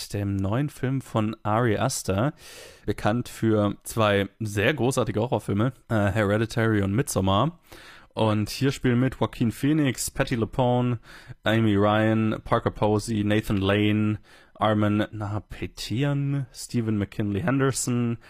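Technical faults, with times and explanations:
7.73 s to the end: adaptive stream at a lower bitrate. Quality drops suddenly, without a gap. Nothing remains above 14.9 kHz. This fits a low-bitrate HE-AAC version.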